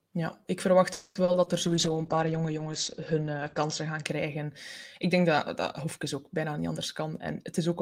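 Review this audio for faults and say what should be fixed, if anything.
Right after "ik verwacht", from 0.93 to 1.22 s, there is a call audio freeze, likely from delayed packets draining the jitter buffer. The last sound stretches into a fading buzz or hiss for about 220 ms, then the audio resumes where it stopped, with nothing lost.

Short concealed packet loss follows at 1.24 s (40 ms), 1.32 s (20 ms) and 1.44 s (20 ms). Unlike the freeze, real audio is missing, and each hole is patched with a brief smear.

A call bitrate drop runs from 1.67 to 4.10 s, falling from 32 to 11 kbps for about 2 s. The bandwidth narrows from 20 kHz to 8 kHz, so the audio sounds muffled and rough. It is a sustained dulling rather than brief glitches.

A jitter buffer speed-up from 6.48 to 7.74 s plays the audio at 108% speed at an unchanged pitch. It trims roughly a tenth of a second to clear the backlog, so the sound feels hurried.

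To prevent these, stabilise the network path and its capacity, and use adaptive buffering that tolerates arrival jitter without large delay swings.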